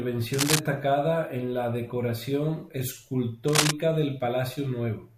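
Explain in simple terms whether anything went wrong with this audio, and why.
Twice in this speech recording, a short burst of scratchy, rustling noise cuts across the sound: from 0.33 to 0.59 seconds, about as loud as the speech itself, and again from 3.48 to 3.71 seconds, a bit louder than the speech. This is cable scratch noise. The likely cause is a worn cable, plug or knob being moved, so its electrical contact flickers and briefly adds rough, uneven noise to the sound.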